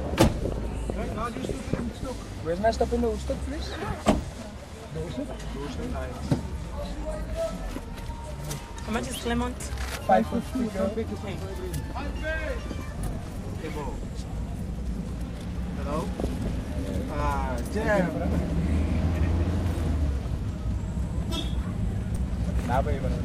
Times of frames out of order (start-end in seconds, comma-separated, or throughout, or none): none